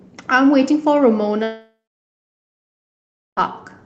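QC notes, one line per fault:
1.43 to 3.39 s, long network dropout: audio smears into a fading buzz, then 1.6 s of silence, and resumes with that stretch gone, likely lost packets.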